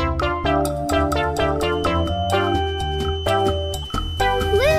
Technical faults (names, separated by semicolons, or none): corrupt frame decoded; feedback whistle